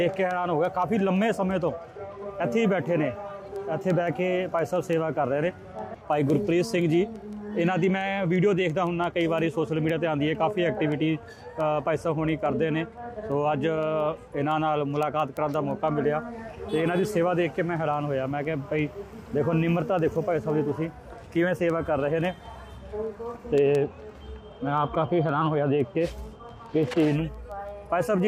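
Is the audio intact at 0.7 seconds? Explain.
No. At 0.7 s the audio is inside a run of word clock ticks lasting from 0.14 s to 28.20 s. The receiving device isn't locked to the sender's clock, so every time the two clocks slip past each other a single sample is dropped or repeated. The tick rate, about six or seven times a second, points to a clock mismatch of roughly 100 parts per million. The result is a steady train of sharp clicks. On a spectrogram these appear as thin, evenly spaced vertical lines. On a zoomed waveform each one is a one-sample step or jag.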